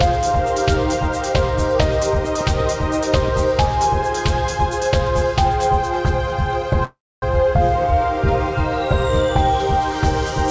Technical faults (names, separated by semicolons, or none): call audio freeze